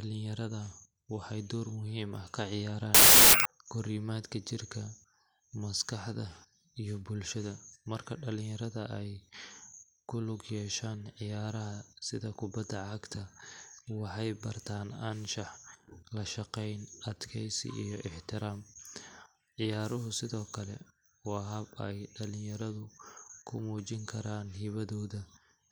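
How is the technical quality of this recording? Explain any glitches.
The recording has one clear glitch, a short burst of corrupted audio early on.

Wrong sample width, from 2.95 to 3.45 s, just before "korimaadka jirka": audio stored as 16-bit integers is read back as packed 24-bit samples, so each value is stitched together from mismatched bytes and only some keep the real signal's top bits. The section plays at 1.5 times speed with raised pitch, heard as loud harsh noise with the speech buried underneath.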